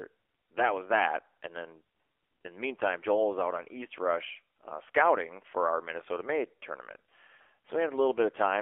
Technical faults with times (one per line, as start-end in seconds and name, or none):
0.00-8.62 AMR narrowband mobile codec